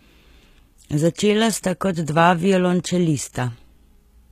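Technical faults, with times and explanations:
Throughout: HE-AAC compression. The damage is plainly audible: sibilants in the speech come out gritty and metallic, and there is no content above 14.9 kHz. The likely cause is HE-AAC coding at a low rate, which fits about 20 kbps. Only the lower spectrum is coded, and the treble is rebuilt from copied lower bands under a coarse envelope. The upper harmonics therefore fail to line up across the crossover.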